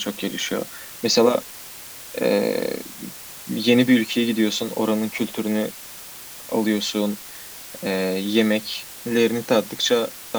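From start to finish the speech sits on low bit depth with dither: about 6 bits, with dither added before rounding, turning the error into a steady, even hiss only about 15 dB below the voice. Unlike undithered truncation, it never crackles or distorts.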